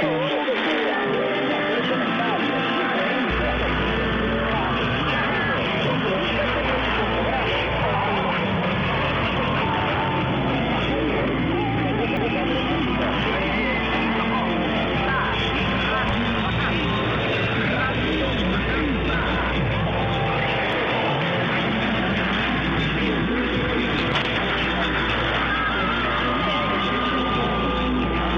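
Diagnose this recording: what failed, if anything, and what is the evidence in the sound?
A CD skip at the playback stage: at about 12.17 s the disc player's laser lost its track, through a knock or a flaw in the disc, and landed on another turn of the spiral. The player muted briefly, for only a few milliseconds, heard as a small tick, and then the audio carried on from a different point, so the sound jumps abruptly rather than continuing smoothly from where it broke off.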